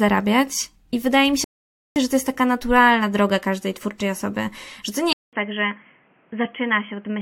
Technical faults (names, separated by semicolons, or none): rebuffering stall; input switched to a poorer device